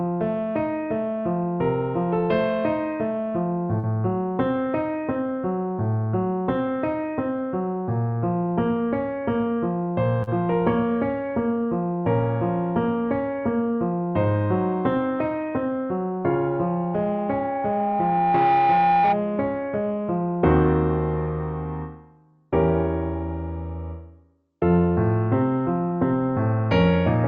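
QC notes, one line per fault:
3.79–3.86 s and 10.23–10.30 s, short concealed packet loss: each spot has a brief smeared wobble where the sound seems to stretch and then blend back, and a short sound there may be lost. About 40 ms of audio arrived too late for the decoder each time, and the receiver filled the gap by extending what came just before, continuing its pitch or imitating it as shaped noise, before fading back into the real audio.
16.27–19.22 s, loudspeaker feedback squeal: a single tone at 804 Hz appears, swells over roughly two seconds into a squeal, and ends up about 5 dB louder than the rest of the sound before it cuts out. A microphone was picking up the loudspeaker it was feeding, and at 804 Hz the loop's gain was above one, so that tone kept reinforcing itself.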